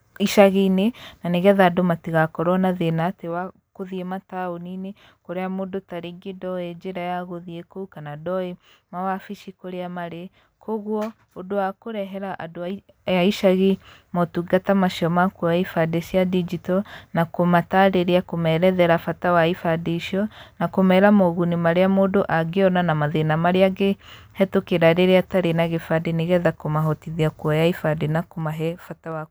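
A gain ramp applied in unsmoothed 2 dB jumps causes zipper noise in this speech twice. Just after "matigakorwo na", from 2.88 to 3.44 s, the level falls by roughly 10 dB at around fifteen steps a second, giving a fast ticking zip. After "kũmahotithia kuoya", from 28.05 to 29.26 s, a drop of around 15 dB moves at about seven steps a second, so the clicks sound slower and more separate.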